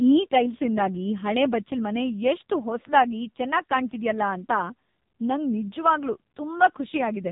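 From start to finish, the speech carries heavy AMR narrowband mobile codec damage. Nothing above 4 kHz survives, and the thin bit budget, which fits a rate near 5.9 kbps, leaves a vocal-tract model driven by sparse pulses. The voice sounds buzzy, muffled and distinctly synthetic throughout.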